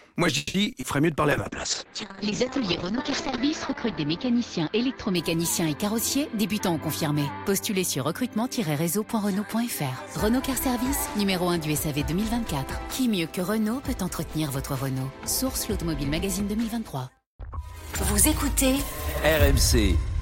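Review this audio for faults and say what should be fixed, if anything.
Repeated packet loss (robotic sound) hits early, from 0.37 to 0.86 s. There are four gaps in that half second, the longest 170 ms. About half the stretch is patched by extending the last bit of sound, giving 230 ms of filler with 60 ms simply missing, so it comes out choppy with pieces missing.

A call bitrate drop runs from 1.33 to 7.60 s. The encoder falls from 128 to 7 kbps and sits at the bottom for about 2.1 s. At that rate the bandwidth shrinks from 20 kHz to 8 kHz, so the top end vanishes and everything turns rough and muffled until it climbs back.

There are two jitter buffer speed-ups. The receiver trims short pitch-period slices to drain excess buffered audio, so things play fast at the same pitch. The first runs from 5.86 to 7.31 s at 107% and cuts roughly a tenth of a second. The second runs from 9.99 to 11.09 s at 105% and cuts a bit less.

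To prevent all of this, fix the network path that's dropping and bunching packets, and let the bandwidth estimator and jitter buffer adapt more gently.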